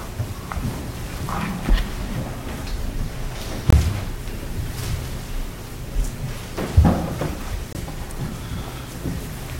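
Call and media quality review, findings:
Gap between chunks, 3.70–3.73 s: hard-edged hole of about 23 ms, sound stops dead and resumes with no loss of content. Gap between chunks, 7.73–7.75 s: same 23 ms hole, about 4.0 s after the first. The regular spacing points to 4 s transport or storage chunks. Silence is inserted at each join by the chunking or playback stage rather than audio being dropped.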